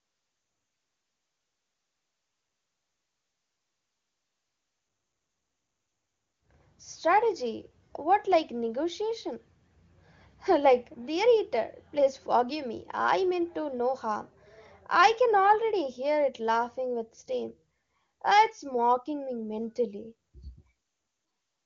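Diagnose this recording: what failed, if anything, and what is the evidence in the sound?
Nothing failed in this recording.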